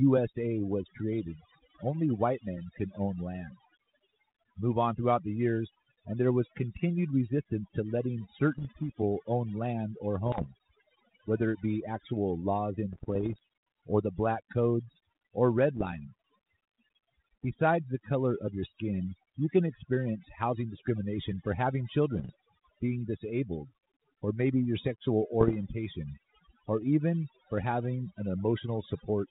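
Overdone noise removal runs throughout the speech: a noise reduction stage set far too strong pushes single frequency bands down or off whenever they sit near its noise estimate. The background drops and breaks up into twinkling specks. The link's sound fits 32 kbit/s G.726 ADPCM, and it suffers bit errors at 8.55–8.83 s, 10.26–10.48 s, 12.93–13.39 s, 15.77–15.87 s, 22.15–22.30 s and 25.40–25.55 s. Each flipped bit also knocks the decoder's step size and predictor off course, giving pops, rough bursts and brief jumps in level.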